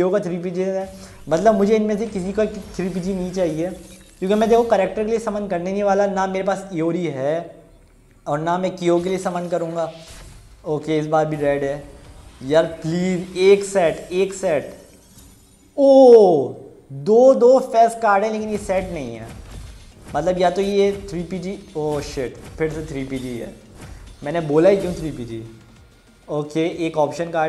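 No technical faults are audible anywhere in this audio.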